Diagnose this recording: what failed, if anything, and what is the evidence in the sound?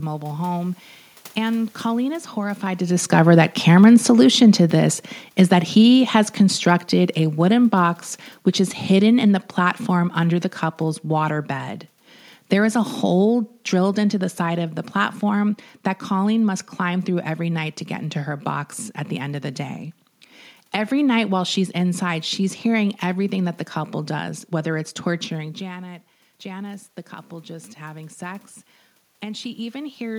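The automatic gain control in the call-processing stage drove the level down. Just before 3 s the talker's position at the microphone changed, and from 3.12 s, after "is horrified to", the gain slides down by about 9 dB over roughly eight seconds, to 11.34 s. The room noise sinks together with the speech. That shared drop identifies the gain stage as the cause rather than the talker, because a talker moving away would leave the background steady.

The same automatic gain control later turned the gain up. Around 25 s the talker moved and the speech arriving at the microphone dropped by about 14 dB. From 25.58 s, after "does whether it's torturing", the control raises its gain by about 5 dB over some four and a half seconds, until 30.14 s. Speech and room noise swell together. The slow, shared rise marks the gain stage compensating, recovering only part of the lost level.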